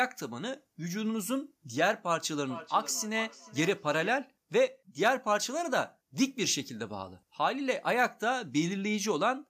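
A speech clip with feedback echo between two devices from 2.39 to 4.21 s. The speech returns roughly every 400 ms, peaking about 15 dB below the voice, thinner and more ringing. A second device nearby replays the call into a microphone, and its echo canceller cannot remove sound it did not play.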